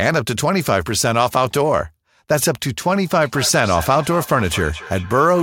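From 3.15 s to the end at 5.43 s, a feedback echo between two devices sets in: the sound returns at about a fifth of a second, peaking about 15 dB below the speech. A spectrogram shows fainter, evenly spaced copies of each burst trailing behind it.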